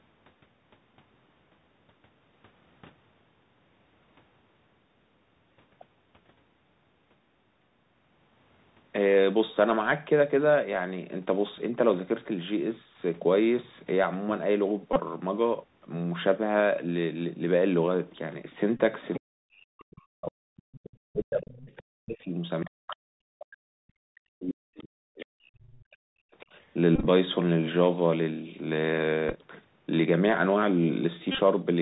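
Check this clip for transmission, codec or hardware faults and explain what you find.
The speech has been through a narrowband Bluetooth headset link, with repeated-packet buzzes, leakage of the far-end voice and suppressed speech during double talk.

Bluetooth CVSD headset codec, throughout: The band stops at 4 kHz. The coder sends one bit per sample, saying only up or down, and adapts its step size. This fits a 64 kbps CVSD link. Loud, bright passages outrun the step and distort, s sounds come out scratchy, and a granular hiss sits plainly under the speech.

Bluetooth headset packet repeated, at 14.93–15.00 s, 18.77–18.80 s, 26.96–27.07 s, 29.29–29.33 s and 31.32–31.39 s: Packets were lost and the last packet's bits were decoded again. The first two lose 22.5 ms each. The later three are scattered, losing 60 ms over about 98 ms, 22.5 ms over about 38 ms, and 56 ms over about 68 ms. The repeats at a 3.75 ms interval form a short buzz near 267 Hz. 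The longest unbroken run is about 30 ms, at 31.3 s.

Other side's voice leaking through, at 19.14 s, 20.57–20.97 s, 21.60–21.79 s, 22.90–22.95 s, 24.78–24.83 s and 26.62–26.66 s: Brief scraps of a second voice come through. The first is about 10 dB below the speech. The rest fall from about 25 dB below to about 40 dB below. These are likely loudspeaker playback that the echo canceller failed to remove from the microphone.

Speech suppressed in double talk, at 19.35–20.67 s and 21.12–26.56 s: The talker's level drops in pieces, by as much as about 40 dB, for roughly 1 s in the first span and roughly 5 s in the second. The echo leaks fall inside or right next to these spans. The likely cause is that the echo canceller could not separate the near talker from the loudspeaker echo while both sides spoke, and turned both down.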